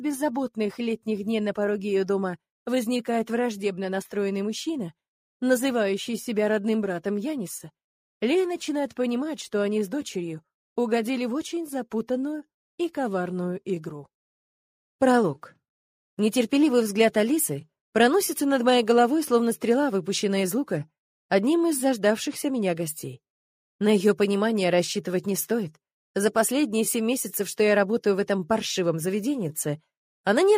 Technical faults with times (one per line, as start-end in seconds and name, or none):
none